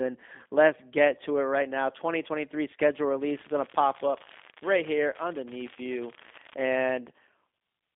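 Throughout, the speech passes through a G.729 codec: the signal has been rebuilt from a vocal tract filter, pitch predictor and sparse pulses, at a rate that fits 8 kbit/s. The band runs roughly 250 Hz to 3.6 kHz with nothing above, and the voice sounds plainly rough and synthetic.

From 3.21 s to 6.55 s, an unreliable data bit appears: one marginal line flips its bit in a random share of samples, each error adding a spike of identical size. The result is a steady crackling fizz laid over the sound, continuing through pauses.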